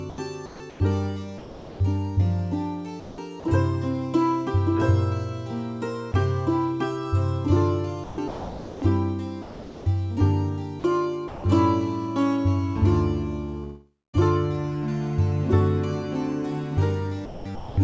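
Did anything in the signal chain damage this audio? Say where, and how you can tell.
Yes. Sound chopped by the voice detector at 0.10–1.80, 3.00–3.44, 8.04–9.86, 10.80–11.44 and 17.25–17.77 s: the sound flickers into synthetic comfort noise, likely the call processing's voice detector gating quiet passages.

Sound dropped by the voice detector at 6.12 s: a brief 20 ms piece of sound gives way to steady comfort noise, likely the same call-processing gate briefly cutting transmission.

Long network dropout at 13.64–14.15 s: about half a second likely never arrives. The receiver extends the last sound as a fading fill, then about 0.24 s of silence, before audio resumes.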